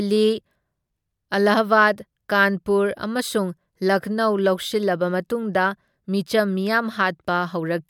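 No technical faults can be heard anywhere in the recording. Nothing in the audio calls for a time stamp or a fault description.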